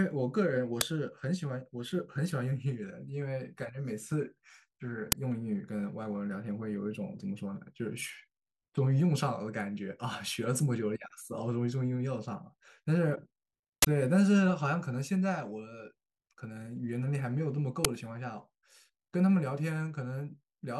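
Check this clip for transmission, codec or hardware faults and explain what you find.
The speech clip has one fault, an uninitialised buffer, which occurs four times: at 0.81 s (5.3 ms), 5.12 s (10.7 ms), 13.82 to 13.85 s (21.3 ms) and 17.85 s (5.3 ms). Each time, a block was sent to the output before audio was written into it, so leftover memory was played as samples. The result is a short, very loud burst of digital noise. The burst lengths fit buffers of 256, 512 and 1024 samples. A dropout would go silent in the same place, and a click would be a single spike. These bursts are full blocks of noise at high level.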